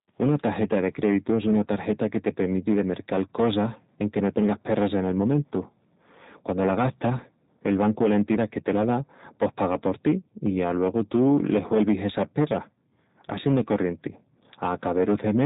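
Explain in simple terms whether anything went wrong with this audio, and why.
Two things went wrong, and both last from start to finish. The first is hard clipping. The speech was pushed louder than the recording chain could handle. So the loudest moments had their tops sliced flat. A small share of the sound was affected. You hear this as a rough crackle on louder syllables.

The second is the G.729 codec, a phone-call compression method. It rebuilds speech from a simplified model rather than keeping the real sound. Nothing above 3.8 kHz survives, so the speech sounds muffled. The damage is plainly audible: rough and slightly robotic.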